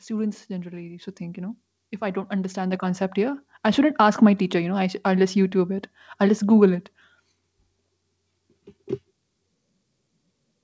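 Speech, with a microphone volume step-up at 1.02 s. The level of the talker and the background jumps together, by about 6 dB, in a single step. There is no fade. It sounds like the call software judged the microphone too quiet and raised the device's input gain at once, mid-stream. Everything after that point sits louder. The call path passes nothing above 8 kHz, which fits a G.722 wideband codec.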